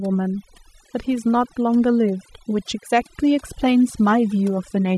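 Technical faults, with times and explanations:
Throughout: overdone noise removal. The speech was passed through noise reduction set far too aggressively for a noisy original. Each frequency band that drops near the tool's noise estimate is pulled down hard or gated off entirely, so the background drops and breaks up into brief twinkling specks, and softer components of the voice are removed along with it.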